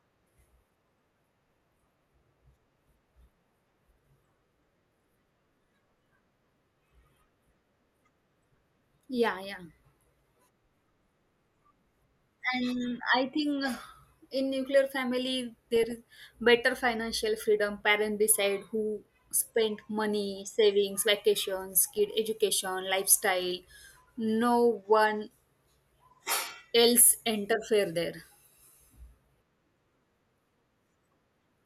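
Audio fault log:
9.44–9.58 s, 15.76–16.14 s, 21.76–22.08 s: DAB burbling. Weak reception lets bit errors slip past error correction into the MP2 data. Corrupted sub-bands jump in level for single frames. The result is short blips of noise in single sub-bands over the speech, after "in nuclear family" in the second, longer burst.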